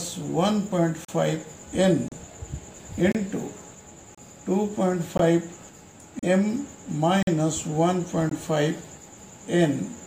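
The sound has a gap between stream segments roughly every second. Short, hard-edged silences fall at 1.05, 2.08, 3.12, 4.15, 5.17, 6.19, 7.23 and 8.29 s, each lasting 20 to 46 ms. The timestamps of adjacent one-second segments don't meet, so the player fills the holes with silence.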